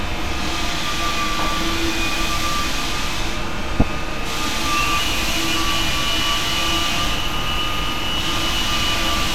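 Weak digital radio reception let bit errors slip past the error correction into the MP2 audio data. This is DAB burbling, between 3.80 and 3.82 s. Corrupted samples put short blips of noise into individual sub-bands, at an error rate on the order of a fifth of a percent. Over the sound this comes out as burbling spread across a handful of damaged frames.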